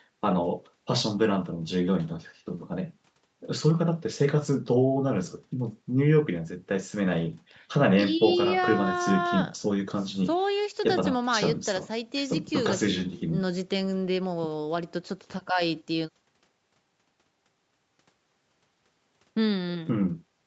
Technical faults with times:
none

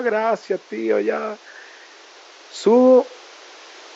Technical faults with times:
none

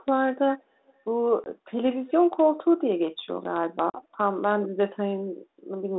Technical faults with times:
0.58-0.93 echo leak
1.44-1.51 packet loss on an ADPCM call
2.08-2.39 echo leak
3.90-4.00 packet loss on an ADPCM call

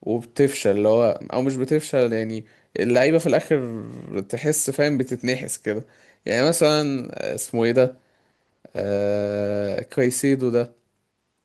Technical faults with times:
1.13-1.23 lost packet rebuilt from error correction
3.87-3.89 lost packet rebuilt from error correction
4.99-5.17 lost packet rebuilt from error correction

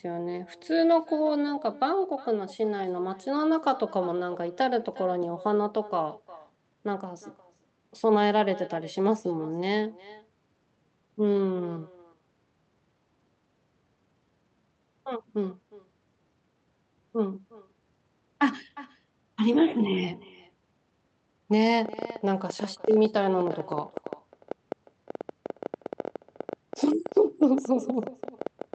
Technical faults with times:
0.00-28.74 echo with no canceller
21.85-28.74 train of clicks

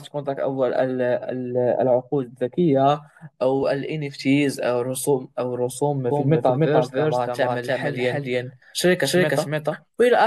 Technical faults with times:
6.11-10.27 doubled audio track

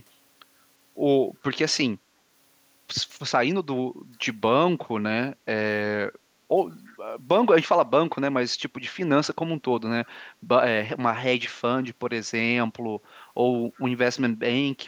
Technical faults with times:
10.05-10.09 echo leak
13.76-13.80 echo leak

